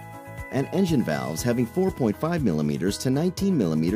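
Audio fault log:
No faults can be heard anywhere in the clip. There is nothing to log.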